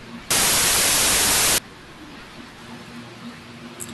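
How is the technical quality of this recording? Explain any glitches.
The recording has one clear glitch. From 0.31 to 1.58 s the speech turns into samples built from the wrong bytes: each sample's bytes get assembled out of order or misaligned, so the jittery low bits dominate. You hear a blast of loud, harsh broadband noise.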